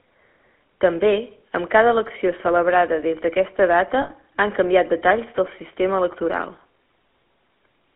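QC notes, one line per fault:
throughout: GSM full-rate codec. The speech carries a plainly audible buzzy, gravelly roughness. The codec rebuilds the voice from a vocal-tract filter excited by a regular pulse train, keeping only a thinned-out excitation, so fine detail turns to grit. The sound points to a 13 kbps full-rate stream over a telephone line band of 250 Hz to 3.4 kHz. On a spectrogram, energy stops sharply near 3.4 kHz with little below 250 Hz, and the harmonics look coarse and smeared.
4.02 to 4.12 s: lost GSM frames. Right after "celebrada des d'aquesta data", about 80 ms of the signal goes bad. Each missing stretch is filled by repeating the last good frame's settings, so the sound freezes into a short rough, metallic ring and does not move on. On a spectrogram the formants flatten into static horizontal bands for that span, and the waveform shows a repeated pattern before normal speech resumes.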